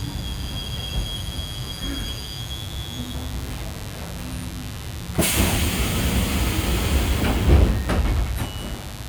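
A steady, raspy buzz runs underneath these everyday sounds from start to finish, sitting fairly prominently, not far below the wanted audio. This is mains buzz on a 50 Hz supply: sharp switching spikes, twice per mains cycle, from something like a dimmer, a rectifier or an unshielded cable, leak into the signal path. Those spikes carry a dense series of 50 Hz harmonics stretching up into the kilohertz range, which gives the buzz its rasp.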